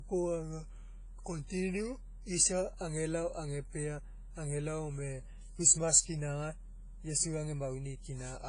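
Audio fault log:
throughout, WMA compression: the speech rings and smears, with a washy hiss that swells and fades along with it, and nothing above about 10.4 kHz. That's likely a low-bitrate transform codec, around 24 kbps, spreading long-block noise and dropping weak detail.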